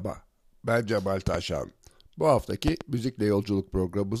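At 1.27 to 1.37 s and again at 2.68 to 2.83 s, a loud pop cuts in as a double thump, each peaking about 15 dB above the speech, which continues underneath. The likely cause is a voltage spike from a connector, switch or static discharge.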